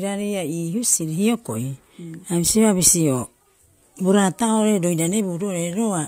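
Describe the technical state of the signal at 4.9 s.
At 4.9 s the speech signal is intact, with no audible technical fault at that moment.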